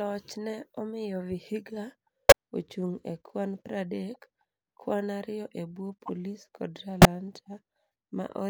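Damaged compressed frames were played anyway, a corrupt frame decoded fault that put energy at the wrong frequencies at 2.29–2.32 s, just before "ochung e kwan", at 4.14 s, 6.06–6.09 s and 7.02–7.05 s. Each is a brief chirp or noise burst, loud except the faint one at 4.14 s.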